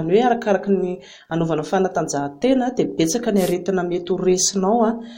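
At 3.36 to 3.54 s, a wireless microphone noise hit: the radio link fades, so receiver hiss bursts through as a brief swish, seen as a broadband spectrogram smear.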